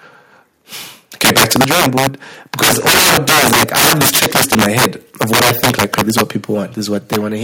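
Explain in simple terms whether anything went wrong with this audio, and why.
Several things went wrong. The worst is integer overflow, which runs through the whole speech clip. The loudest moments were pushed far past the largest number the system can store. Instead of stopping at the limit, they wrapped around to the opposite extreme. That gives sharp, violent cracks on loud syllables, much harsher than ordinary distortion, and it affects a small share of the sound.

From 1.21 to 1.62 s there is microphone overload. The loudest parts sound crackly and rough, with their peaks flattened. The likely cause is that the microphone's input was set too high, so those peaks ran into the ceiling of the recording hardware.

At 1.62 s, just before "drawing board", the microphone volume steps down. The speech and the background both get quieter at once, in a single step. This is likely the call software noticing the overloaded peaks and turning the input down to stop them.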